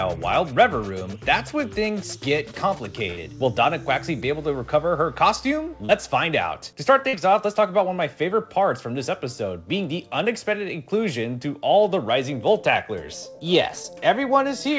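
At 3.10 to 3.18 s and 7.09 to 7.14 s, a burst of packet loss: the receiver extends and fades the last sound, then jumps ahead, skipping roughly 60 ms and 50 ms. At 5.85 to 5.90 s and 13.83 s, short concealed packet loss leaves brief synthesized smears blended back into the stream, over audio band-limited at 8 kHz.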